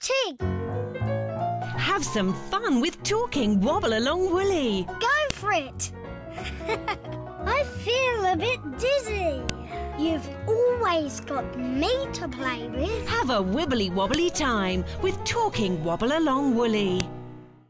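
Sharp, loud clicks at 5.30, 9.49, 14.14 and 17.00 s are a file header played as audio: header bytes at each joined piece's start are read as samples. Each shows as a brief spike on the waveform and a thin full-band vertical line on the spectrogram.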